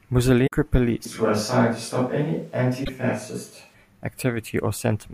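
A brief glitch breaks the speech from 0.43 to 0.52 s: damaged data in a compressed stream, where corrupted frames throw the decoder out of sync until it finds the next valid header. From 1.05 to 3.74 s the speech turns roomy and hollow with thinner bass and faint background noise well below it, though the level barely shifts, then snaps back. This is likely a switch to a distant microphone after the close one dropped out. Within that stretch, at 2.81 to 2.89 s, the same compressed-stream corruption produces a second glitch.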